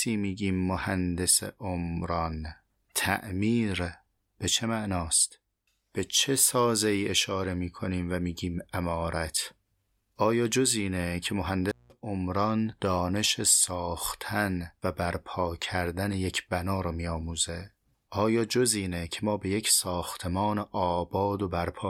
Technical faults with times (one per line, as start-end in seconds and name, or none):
11.69-11.92 intermittent contact